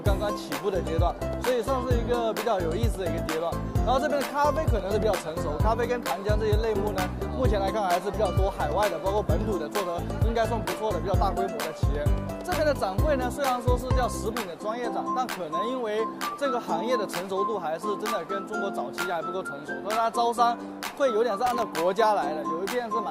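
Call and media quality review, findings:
Loose connector crackle, 21.46–21.62 s: irregular scratchy burst, not periodic clicks. Worn or dirty contact intermittently breaking the signal path.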